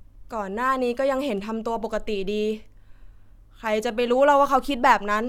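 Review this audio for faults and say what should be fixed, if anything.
Nothing here needs fixing, since no faults turn up anywhere in this bit of speech.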